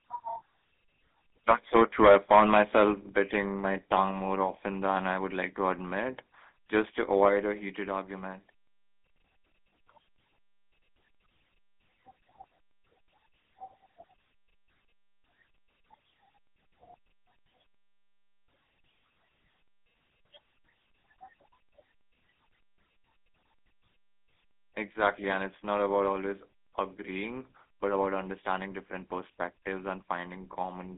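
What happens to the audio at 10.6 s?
At 10.6 s the speech carries GSM full-rate codec damage, present across the whole clip. The sound is confined to roughly 200 Hz to 3.6 kHz, and the pulse-train excitation adds a buzzy, gravelly roughness. Plain telephone band-limiting would sound muffled but smooth, without that grit.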